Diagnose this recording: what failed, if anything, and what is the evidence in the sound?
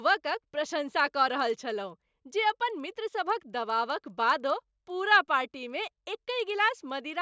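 The fault is at the sample-rate conversion stage: the resampler restarted on every block. Faint ticks repeat at 10 Hz throughout, only while speech is present. The converter handled each 100 ms block alone, which fits 44.1 kHz to 16 kHz conversion. Each block edge lacked true neighbouring samples and picked up a small error.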